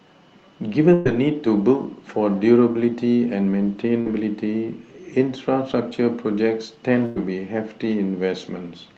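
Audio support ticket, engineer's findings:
Burst of packet loss, 0.93 to 1.07 s. About 120 ms of audio missing. Held buzz or fading hiss across the gap, then audio resumes further on. Jitter buffer or network. Receiver extended the last sound and attenuated it.

Burst of packet loss, 7.05 to 7.18 s. About 100 ms missing. Same fading fill, then a jump forward. Same component and mechanism.

Short concealed packet loss, 4.01 s. About 40 ms never reached the decoder in time. Brief smear, quick wobble at the join. Jitter buffer and decoder concealment. Last sound extended from its pitch if voiced, as shaped noise if not, then cross-faded back into real audio. Any short consonant there could be lost.

Call path present throughout. Band limit near 8 kHz, with coding noise that fits Opus at 32 kbps.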